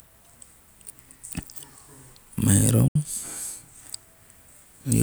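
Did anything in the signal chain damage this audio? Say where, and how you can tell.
Yes. The wireless playback link likely lost a short run of packets, a Bluetooth dropout. The speech cuts to silence from 2.88 to 2.96 s, with about 70 ms of audio missing, which fits a few packets. It then resumes further along, as if it had kept playing.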